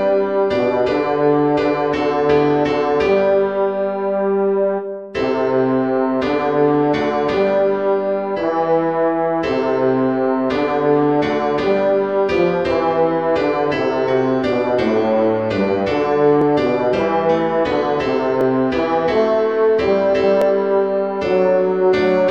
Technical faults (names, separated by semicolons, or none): periodic USB or driver dropouts